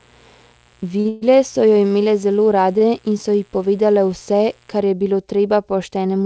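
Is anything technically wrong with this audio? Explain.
Yes, there are a few problems.

From the start to about 4.8 s there's mains buzz: a steady, raspy hum sitting roughly 35 dB under the speech. Something like a dimmer or rectifier, or a missing shield, is letting switching spikes into the line twice per 60 Hz cycle, so the buzz carries a stack of harmonics well up into the kilohertz range.

There are two short stalls from a late packet, at 1.00 to 1.08 s and at 2.78 to 2.84 s. In each, a packet missed its slot and the jitter buffer ran dry, so the receiver held the last bit of sound for about 48 ms and then about 23 ms, until the packet arrived. You hear a sound drawn out a touch too long, with a slight buzz or dip, and nothing is dropped.

Right after the first stall, from 1.09 to 1.24 s, there's a call audio freeze lasting about 128 ms. It was likely caused by packets being held up in transit, which emptied the buffer again. 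The last sound is extended as a fading buzz that never quite drops to silence, and then the speech picks up where it left off. The net effect is an inserted pause.

Nothing comes through above 8 kHz, which fits the call's G.722 codec running at 64 kbps.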